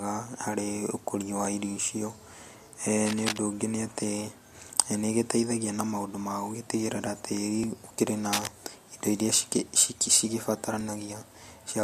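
At 1.45 s, just before "irio icio", a dropped buffer (overrun) occurs: a few milliseconds of audio likely went missing because they weren't read before the hardware overwrote them, so the two sides join with no gap. From 3.06 to 3.38 s comes cable scratch noise, a dense, uneven rustle a little below the speech level, likely from a worn cable or connector being moved. Another overrun at 7.64 s skips a longer piece, and a second scratch burst from 8.33 to 8.50 s is about as loud as the speech. A final overrun falls at 10.81 s. The overruns are jumps forward with no silence, while the scratches last a few tenths of a second and sit on top of the sound.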